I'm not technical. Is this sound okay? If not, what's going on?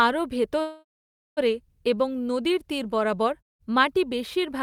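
No. From 0.61 to 1.39 s the speech stops, and the last sound hangs on as a fading buzz before going silent for almost half a second. It then resumes at "এবং নদীর তীর বরাবর" with nothing lost, just late. This is a call audio freeze, likely from delayed packets on the network.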